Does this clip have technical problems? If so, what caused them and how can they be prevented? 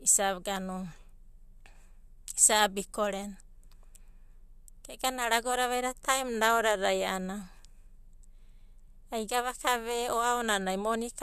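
No, this clip has no technical problems, so there is nothing that caused them and nothing to prevent.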